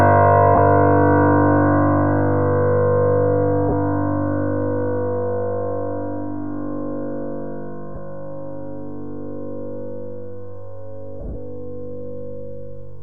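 Lost LE Audio frames at 0.55, 3.69 and 7.95 s, and scattered over 11.20 to 11.36 s. The decoder fills each gap with a noisy smear.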